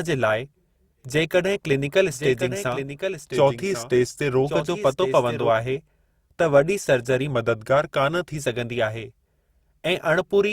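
From 2.11 to 5.50 s a doubled audio track appears: a second, noticeably quieter copy of the speech trails about a second behind, likely from a duplicate capture path. Unlike an echo, it has no decay or room colour and starts and stops abruptly. From 3.32 to 4.44 s and again from 7.30 to 8.36 s, a drift correction step slows playback by 5.83%, dropping pitch about a semitone (104 cents), likely from clock-matching software. Unlike wobbling wow, the pitch holds steady and then snaps back.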